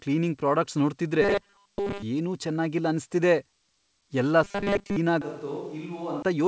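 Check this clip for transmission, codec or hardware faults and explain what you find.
Two kinds of fault show up: a robotic buzz in two places and a late change of microphone. The call path is G.722 at 64 kbps, with nothing above 8 kHz.

Robotic sound from repeated short buffers, 1.22 to 2.02 s and 4.44 to 4.96 s: the likely cause is audio arriving too seldom, so playback loops the last buffer to fill the gaps. The buzz sits at 200 Hz, which fits a 5 ms repeated block. Most of the real audio in those spans is replaced by repeats, so the speech becomes a fixed-pitch metallic drone that only loosely follows the words.

Switch to a distant microphone, 5.22 to 6.22 s: the close microphone's signal likely drops out, and the recording falls back to one further from the talker. The change is abrupt in both directions. The speech turns roomy and hollow, thinner in the bass, and roughly 10 dB quieter. 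Background noise rises, to around 30 dB below the speech.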